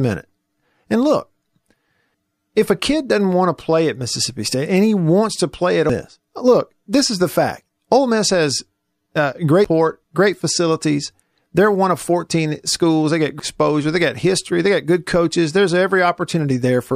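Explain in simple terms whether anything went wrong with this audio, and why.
The speech skips twice: at 5.90 s, after "wants to play at", and at 9.65 s, after "has uh". Each jump drops about a third of a second. This is audio missing between chunks, likely from recording in 4-second blocks and losing sound at each handover.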